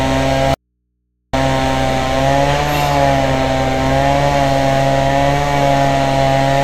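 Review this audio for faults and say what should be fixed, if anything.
An audio dropout to a faint residue runs from 0.54 s to 1.33 s, a break of about 0.79 s. The sound cuts out abruptly and returns just as suddenly, and the gap holds only mains hum, roughly 55 dB below the signal. The likely cause is a brief loss of the source, such as a loose connector or failed link, while the input stage stayed live. On a waveform the gap is a near-flat stretch with squared-off edges. A spectrogram shows a dark band containing only thin horizontal lines at the hum frequency and its harmonics. Securing cables and monitoring the input for signal loss during recording would prevent it.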